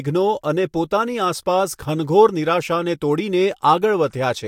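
Nothing goes wrong anywhere in this speech recording, so there isn't a single technical fault to point to along the way.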